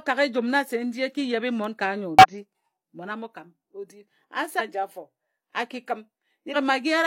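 At 2.19 s the speech breaks into a short glitch lasting about 70 ms. This is damaged data in a compressed stream. Some bytes of the encoded file are wrong, so the decoder misreads those frames, loses sync and hunts for the next valid frame header. The same fault returns at 4.55 s for about 60 ms, and at 6.51 s for about 40 ms. Each one is a brief glitch cutting across the speech.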